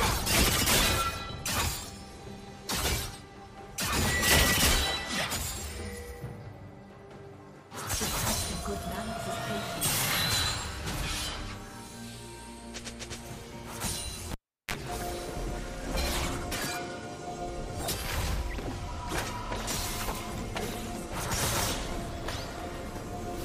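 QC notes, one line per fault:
14.32–14.74 s, cable pulled and plugged in: a pop as the live connection breaks, about 373 ms of near silence while unplugged, then a 32 ms burst of 50 Hz mains buzz as only the plug tip makes contact, and a second pop when the signal returns.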